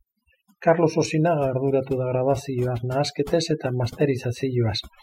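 Overdone noise removal runs through the whole speech clip. The noise reduction was set too hard, so bands near the estimated noise floor are pulled down or gated off, taking quieter speech detail with them. Pauses drop and break up into twinkling specks.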